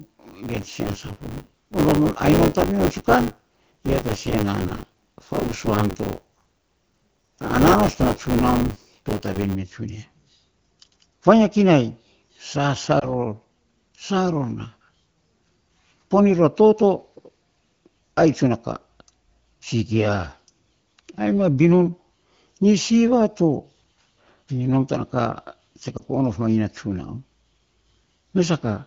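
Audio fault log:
0.00–9.56 s, buffer tearing: a steady robotic buzz at 100 Hz rattles through the sound. The writer and the hardware reader have slipped, so about a fifth of each period replays audio from about 20 ms earlier, with hard joins on both sides.
13.00–13.08 s and 25.97–26.02 s, lost AMR speech frames: each is a brief dip or warble, the second just before "of mainy na". Each points to a single lost 20 ms frame that the decoder patched by repeating the last good settings at lower gain.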